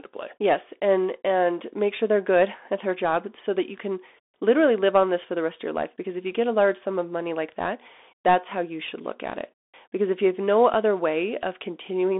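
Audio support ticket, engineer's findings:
Bluetooth CVSD headset codec throughout: speech band-limited to roughly 250 Hz–3.6 kHz, dead above 3.8 kHz, scratchy s sounds, granular hiss. One-bit slope coder, fits 64 kbps headset link.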